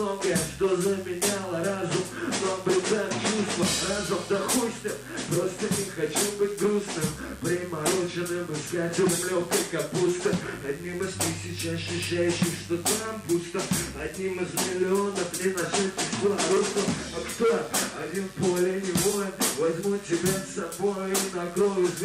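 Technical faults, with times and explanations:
Throughout, mains buzz: a steady, raspy buzz sits under the sound for the whole clip, sitting roughly 25 dB below it. It has a coarse, gritty edge rather than a smooth hum. The cause is interference from a 50 Hz mains supply, where sharp switching spikes from something like a dimmer, a rectifier or an unshielded lead arrive twice per cycle. Those spikes carry harmonics of 50 Hz far up into the kilohertz range, which gives the buzz its rasp.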